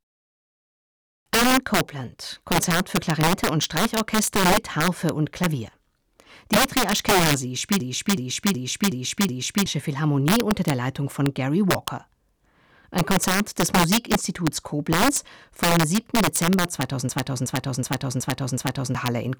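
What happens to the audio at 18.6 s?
At 18.6 s the audio is inside a system hang loop running from 17.09 to 18.95 s. The playback froze while the hardware kept cycling one 0.37 s stretch of its ring buffer, which fits a 16384-sample buffer. That piece repeats five times at about 2.7 Hz, giving a machine-gun stutter, and roughly two seconds of real speech are lost. Unlike a network dropout or packet-loss glitch, each repeat is an exact copy, with no silence or smoothing between them.

An integer overflow also runs through the whole clip, including this moment. With the signal driven about 6 dB too hot, the few peaks that exceed the integer limit wrap to the opposite sign instead of being held at the ceiling. Clipping would only flatten those peaks, but here they jump across the full range and produce sharp, violent cracks.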